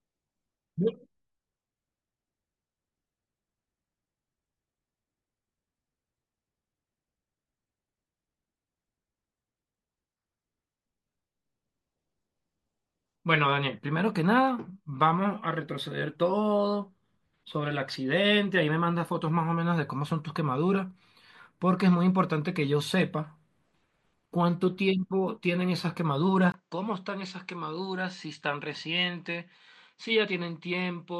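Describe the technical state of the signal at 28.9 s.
At 28.9 s the recording is inside a stretch, from 26.52 s to the end, where the input was likely switched to a poorer device mid-take. The new path passes nothing above 8.3 kHz, so the speech sounds duller and boxier than before. It also comes in a few decibels quieter, with its own faint background noise sitting well under the speech. A brief 20 ms gap marks the switch itself at 26.52 s.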